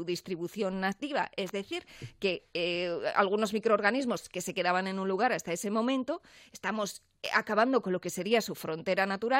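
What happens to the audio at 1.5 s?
A sharp snap from 1.46 to 1.49 s is an electrical switching spike, likely from a nearby switch arcing into the audio line. It sits on top of the sound rather than interrupting it, which separates it from a dropout or digital glitch.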